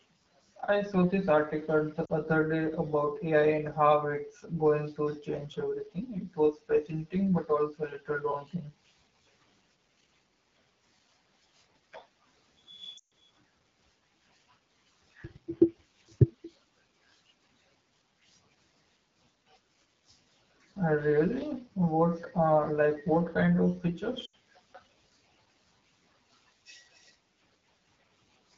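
The whole clip carries the sound of the AMR wideband (HD Voice) codec pushed to one of its lowest modes, and the damage is plainly audible. The rough, raspy texture fits roughly 8.85 kbit/s. At that rate the pulse-driven vocal tract model can't track the speech closely, so everything below 6.4 kHz gets gritty. The top band up to 7 kHz is just shaped noise filling in for the real content.

There are three spots with lost AMR speech frames. At 2.05 s, between "saw this article the" and "other day about", about 40 ms drops out, which fits two missing frames. The decoder reuses the last good pitch and vocal tract settings with falling gain, so you get a quick warbly dip. At 12.97 to 13.12 s a longer 140 ms run drops the sound to near silence. At 24.25 s, right after "like what kind of", an 80 ms gap drops the sound to near silence before the voice comes back weak or rough.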